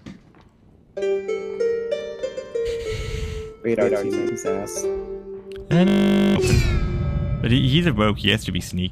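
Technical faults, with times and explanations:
2.19–4.29 s, doubled audio track: A second copy of the sound runs alongside the first, trailing by roughly 150 ms. It sits around 5 dB below the original. The copy is full-band and dry, with no decay or room colour. It cuts in and out abruptly at both ends. A second, slower capture path likely recorded the same signal twice.
5.88–6.36 s, system hang loop: The sound locks onto one 20 ms fragment and repeats it exactly, some two dozen times. At 50 repeats per second this fuses into a steady buzz, not a stutter. The computer or driver froze while the hardware kept cycling the same short ring buffer. Roughly half a second of real audio never arrives. Normal sound resumes when the system recovers.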